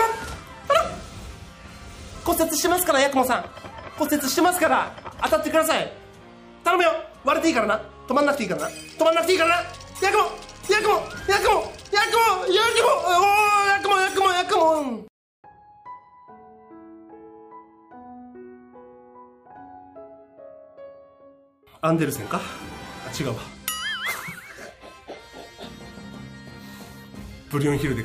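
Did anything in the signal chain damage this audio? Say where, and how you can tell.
No, nothing in the chain audibly damaged this audio.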